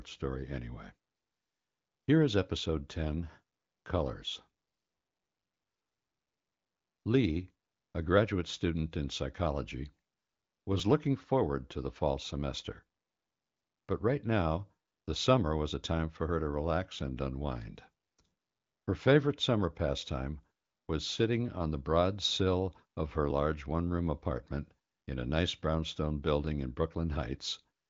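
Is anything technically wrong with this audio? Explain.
Yes. There are two brief jumps where the speech skips forward, at 10.80 s just before "looking forward to the" and at 23.31 s between "broad sill of her" and "large one room apartment". Each is a tiny skip rather than a gap, losing only a few milliseconds of sound. This is likely a dropped buffer (overrun): the software failed to read a block of samples before the hardware overwrote it, so the audio on either side was spliced directly together.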